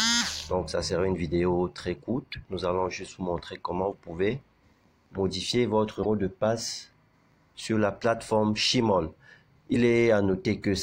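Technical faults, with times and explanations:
2.31–2.35 s, 3.91–3.94 s, 6.02–6.05 s, 9.73–9.76 s, broken MP3 bit reservoir: brief garbled glitches as the audio jumps ahead, likely from dropped frames starving the next 26.1 ms frame of borrowed data.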